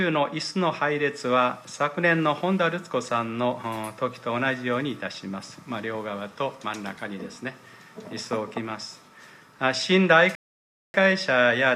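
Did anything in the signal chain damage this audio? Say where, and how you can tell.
Yes: a rebuffering stall at playback, 10.35 to 10.94 s. The player ran dry and inserted 0.59 s of silence. Unlike a dropout, the sound resumes where it stopped.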